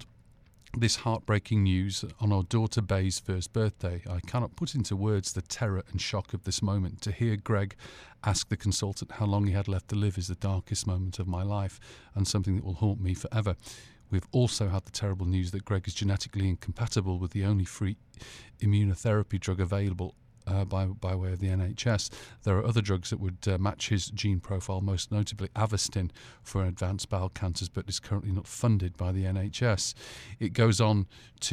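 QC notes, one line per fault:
Nothing stood out on listening to the speech.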